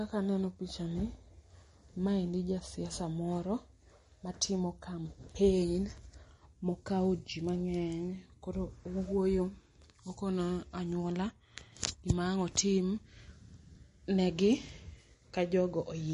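Heavy MP3 compression, likely at a low bitrate around 40 kbps, has starved this speech recording of bits throughout. The encoder has cut everything above 10.6 kHz and switched weak frequency detail on and off between frames, leaving a plainly audible watery, swirling texture.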